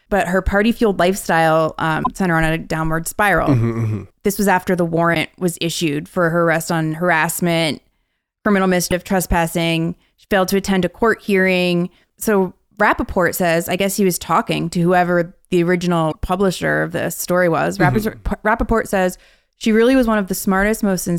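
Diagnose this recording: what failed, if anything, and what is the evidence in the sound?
The codec stage failed, with damaged data in a compressed stream. Brief blips break the speech at 2.0, 5.11, 8.87 and 16.08 s, each 50 to 70 ms long. At each one, corrupted frames throw the decoder out of sync. It skips ahead to the next valid frame header.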